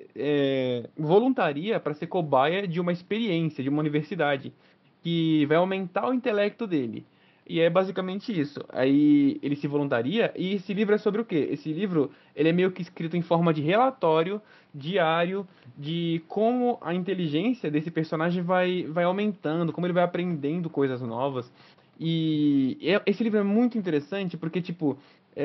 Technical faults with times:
none

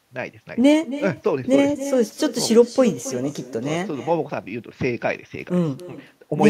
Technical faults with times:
0.00-6.49 echo with no canceller

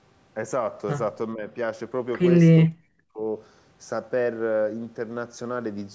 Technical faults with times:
1.34-1.45 speech suppressed in double talk
2.62-3.21 speech suppressed in double talk

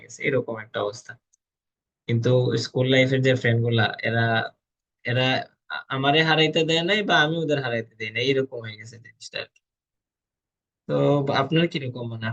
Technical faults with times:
none

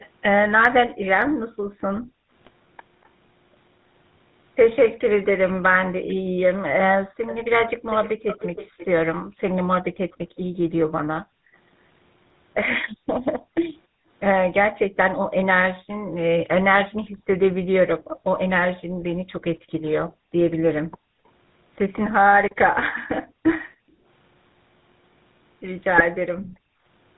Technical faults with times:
0.00-27.17 GSM full-rate codec
0.00-3.08 echo leak
0.92-2.31 background gated by the echo canceller
2.41-2.53 GSM bit errors
6.14-26.85 background gated by the echo canceller
7.26-10.17 echo leak
25.96-26.05 GSM bit errors

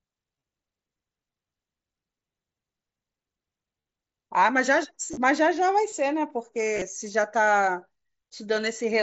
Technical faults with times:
0.36-0.43 concealed Bluetooth headset packet loss
3.81-3.85 concealed Bluetooth headset packet loss
5.08-5.17 concealed Bluetooth headset packet loss
6.75-6.82 concealed Bluetooth headset packet loss

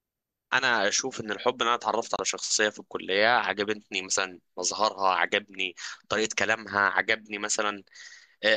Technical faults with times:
2.16-2.19 digital broadcast dropout

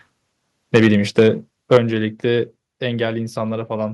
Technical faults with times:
0.74-1.28 microphone overload
0.77 microphone volume stepped down
1.71-1.77 microphone overload
1.77 microphone volume stepped down
2.79 microphone volume stepped down

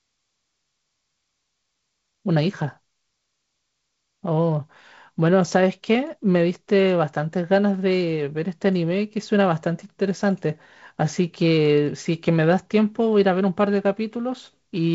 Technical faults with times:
none

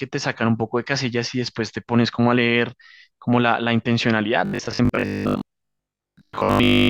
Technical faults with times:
4.45-6.89 robotic sound from repeated short buffers

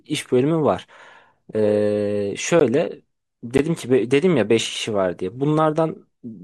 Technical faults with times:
2.60 block of digital silence
3.58 block of digital silence

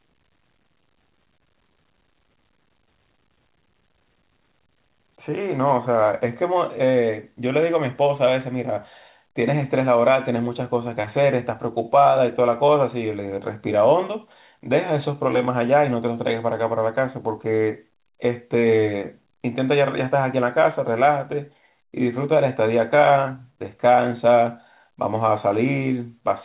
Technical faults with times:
none

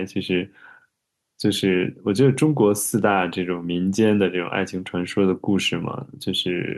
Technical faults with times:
none

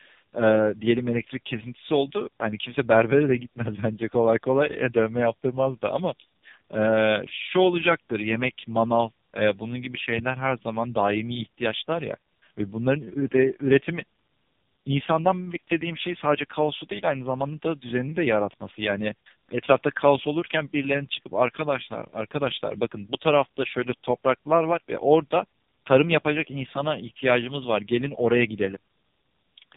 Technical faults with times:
0.00-29.77 tandem speech coding

